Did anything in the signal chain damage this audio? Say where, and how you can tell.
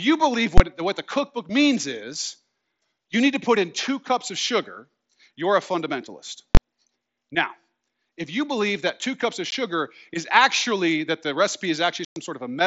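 Yes. Two short, very loud bangs break the speech: at 0.58–0.60 s, between "you believe" and "what the cookbook means", and at 6.55–6.57 s, after "sugar you're a fundamentalist". These are invalid numbers at full scale. A processing stage produced infinite or invalid values, which clipped to the maximum for about 21 ms, which fits a 1024-sample block.

There are also holes with hard edges. One is at 9.51 s, between "that two cups of" and "is actually that the". A longer one at 12.05–12.16 s lasts about 112 ms. These come from unconcealed Bluetooth headset packet loss on the wireless link. Lost packets were replaced with silence or an idle pattern, not smoothed over, even though the mSBC wideband codec is otherwise working normally, with only light codec damage.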